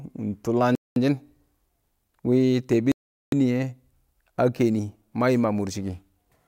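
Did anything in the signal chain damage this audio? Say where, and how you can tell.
Yes. The speech drops to complete silence twice, from 0.75 to 0.96 s (about 210 ms) and from 2.92 to 3.32 s (about 406 ms), then carries on. The likely cause is a Bluetooth stall on the wireless playback link. Interference delays packets, the receiving device's buffer empties, and output stops until retransmitted audio arrives. The gaps are silence rather than noise or garbling, which points to starved playback rather than codec damage.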